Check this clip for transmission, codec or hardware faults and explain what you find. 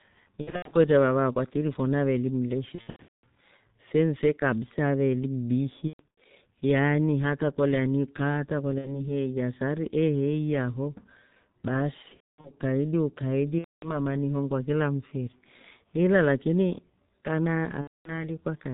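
Two faults are present in the speech.

G.723.1 codec, throughout: the heavy low-rate coding, consistent with about 6.3 kbit/s and 30 ms frames, cuts everything above 4 kHz and tracks the voice sluggishly, leaving it muffled and hoarse with smeared consonants.

VoIP packet loss concealed by the speech codec, at 0.41–0.74 s, 2.75–3.24 s (between "akwa tiripho naveeli" and "fenfe kabisa aveeli"), 5.88–6.18 s, 8.79–9.00 s (between "kolya ni kaa hata" and "heeiya sari"), 12.02–12.51 s, 13.58–13.98 s (before "ni ihongua kila mfiri") and 17.81–18.25 s: audio went missing, about 60 to 390 ms per event with gaps up to 240 ms long. The decoder filled the holes by repeating its last pitch and filter at falling gain. These stretches sound like a fading buzzy tone or coloured noise, and the voice stays weak or distorted briefly after real audio resumes.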